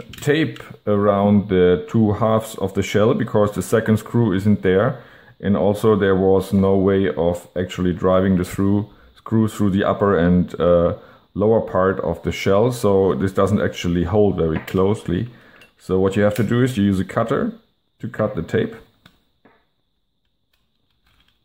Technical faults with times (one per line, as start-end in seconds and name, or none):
none